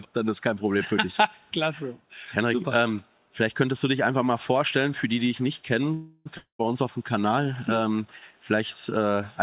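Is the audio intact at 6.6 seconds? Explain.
No. From 6.37 to 6.69 s the sound breaks off in what is likely a long network dropout: about 220 ms of audio never arrived. The receiver stretched the last sound into a fading buzz or hiss for roughly 0.2 s, then left about 0.1 s of silence, so 6.6 s falls in that gap. On a spectrogram the bands smear into flat horizontal streaks that fade to an empty column below the 4 kHz call-band ceiling. The waveform shows a decaying repetitive pattern, then a flat line before the sound resumes with that piece missing.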